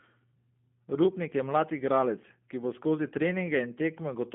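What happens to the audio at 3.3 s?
At 3.3 s you're hearing G.729 codec coding, present throughout: speech squeezed into roughly 150 Hz–3.4 kHz and rebuilt from a vocal-tract model, sounding rough and synthetic, consistent with 8 kbit/s.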